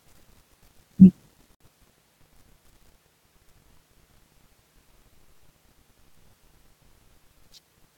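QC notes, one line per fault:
1.55 to 1.60 s, gap at a join of encoded pieces: the speech cuts into a 57 ms gap with smeared edges, then resumes where it stopped, because separately encoded pieces were joined with the encoder's start-up delay and final-frame padding left in.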